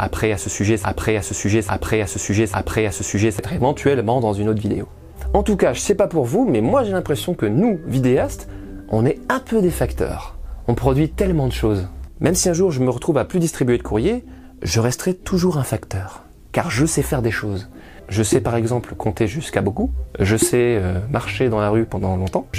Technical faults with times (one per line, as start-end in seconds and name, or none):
0.00-3.39 broken-record loop